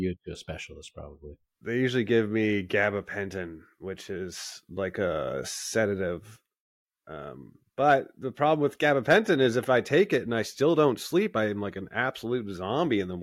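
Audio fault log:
The signal holds steady at a consistent level and bandwidth, with nothing in its technical state departing from normal playback.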